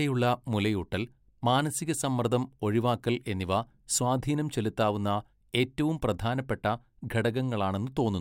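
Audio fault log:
Nothing in the speech stood out as a fault on listening.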